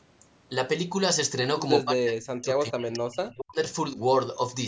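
From 1.83 to 3.57 s the speech sinks very deep, almost cutting out, then dips slightly at 3.92–3.99 s, likely speech suppressed in double talk as the echo canceller turns down this talker along with the loudspeaker echo.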